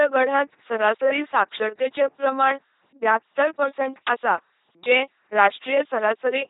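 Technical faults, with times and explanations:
Throughout, LPC-10 vocoder: the speech has been reduced to a short-order vocal tract filter driven by either a pulse train or noise, with each moment forced to be fully voiced or fully unvoiced. The result is a heavily degraded, buzzing, mechanical robot voice, with stray buzz or hiss where the voicing choice goes wrong. Nothing is present above 3.8 kHz, consistent with a 2.4 kbit/s coder.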